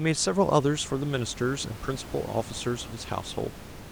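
No technical faults are present in the speech, and the only background is the room's own noise, sitting about 15 dB below the voice.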